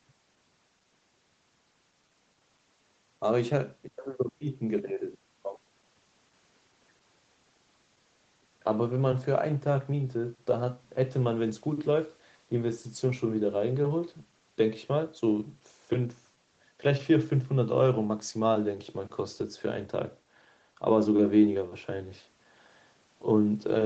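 No technical faults can be heard in this speech recording.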